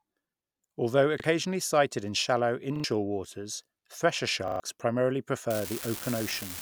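At 1.2 s, just before "sighted in shallow", a repeated buffer occurs. Fresh audio failed to reach the output in time, so the last 40 ms block was played once more, with a hard join at the seam. At 2.76 s, after "sighted in shallow" and before "waters thresher", the same block sounds two extra times. At 4.48 s, after "waters thresher", it sounds three extra times. Each repeat is heard as a short stutter. The stutters also cost original material: about 40 ms, then roughly 70 ms, then roughly 100 ms.

From 5.5 s to the end of the clip, an unreliable data bit appears. One data line is marginal, so its bit is wrong in a random share of samples. Each wrong bit adds a spike of identical size. The result is a steady crackle or fizz laid over the sound, and it continues through pauses as well as active passages because it does not depend on signal level.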